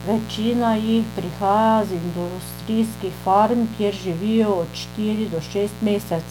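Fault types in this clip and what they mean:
Mains buzz: A steady, raspy 60 Hz buzz runs under the speech throughout, about 15 dB below it, with harmonics reaching up into the kilohertz range.
Generation loss: The speech sounds swirly, smeared and hollow, with blurred attacks. This is likely from repeated MP3 re-encoding, roughly three passes at 128 kbit/s.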